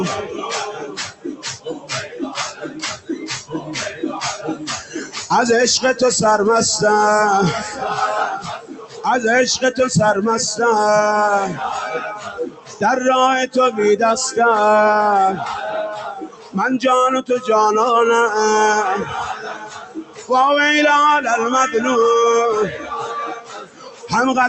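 From the start there's a noise suppressor applied to music or sounds, a speech-tuned one that treats held, steady material as noise and pulls it down. The level swings by around 10 dB depending on what's sounding, so attacks punch through while anything sustained sinks a moment later. That gives the whole thing a pumping, thinned-out feel, with tails that never quite bloom.

On top of that there are seven stretches of sound cut by the noise suppressor: 0.72 to 2.19 s, 2.51 to 3.69 s, 8.4 to 9.05 s, 11.96 to 12.82 s, 15.94 to 16.55 s, 19.33 to 20.31 s and 22.71 to 24.12 s. In each one the suppressor decides a sustained or decaying passage is noise and clamps it by about 13 to 14 dB at worst, over roughly half a second to a second. You hear the body of the sound drop away and its decay get chopped short while any sharper onsets survive. The call path itself has a top end ending around 8 kHz, which fits Opus running at something like 32 kbps.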